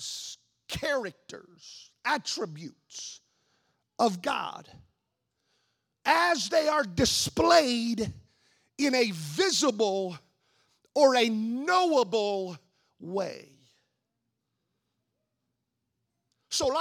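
A speech recording, with nothing technically wrong to report.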